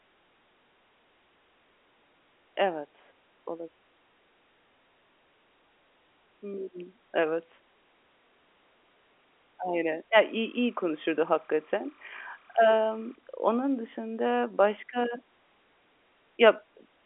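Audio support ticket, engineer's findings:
Timecode bleed, 10.15 to 13.15 s, ending just before "onun dışında başka". Chirping warble under the speech, about 35 dB below it, toggling near 1 and 2 kHz. Probable leak from an adjacent LTC track or cable. Cadence fits 29.97 fps code. Sits inside the telephone band, so it passes the G.711 line.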